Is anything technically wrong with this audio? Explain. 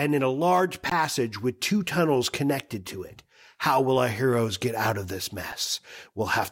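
Yes. There are two brief underruns with held sample, at 0.90 s and 5.52 s. The output buffer ran dry and the converter froze on its last value for about 18 ms, then 5 ms. The speech flattens into a held level, and roughly that much live audio was lost each time.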